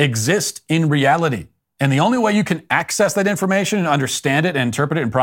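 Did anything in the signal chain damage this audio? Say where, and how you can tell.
Yes. Clock drift buffer slips at the buffer stage: clicks every 0.63 s from 0.26 to 4.71 s, thin vertical spectrogram lines, likely from a few-hundred-ppm clock mismatch.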